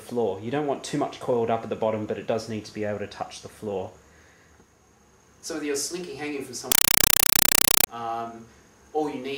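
From 6.72 to 7.87 s, a compressed stream is played as audio: an undecoded AC-3 bitstream, which fits 256 kbps, is treated as ordinary samples. Each frame becomes a 5.33 ms noise burst then silence, repeating 31.25 times a second as loud, chattering static replacing the sound.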